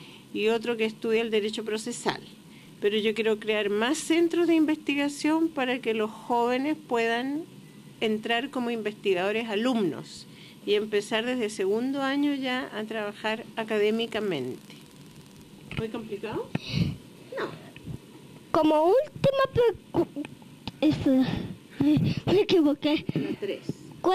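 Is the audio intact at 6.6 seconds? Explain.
Yes, the audio is intact at 6.6 seconds, with no dropout, click, distortion or other fault audible at that moment.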